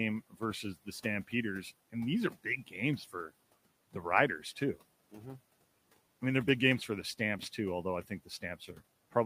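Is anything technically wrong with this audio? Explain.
Yes. Speech cut by the noise suppressor occurs at 0.3–0.42 s, 8.04–8.43 s and 8.6–8.81 s. Each time the suppressor mistakes speech for noise and turns it down by about 14, 12 and 8 dB, so the sound goes swallowed and faint. On a waveform these show as sudden envelope dips; on a spectrogram, as faded patches. The room noise sits about 21 dB below the speech.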